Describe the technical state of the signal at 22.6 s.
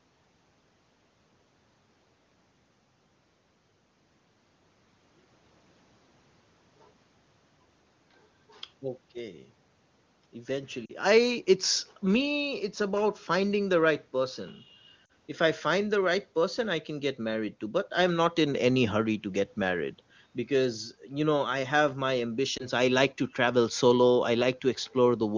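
A brief dip and warble from 22.57 to 22.66 s: lost AMR speech frames, consistent with a single 20 ms frame failing its checksum, so the decoder repeated prior pitch and vocal-tract settings at falling gain.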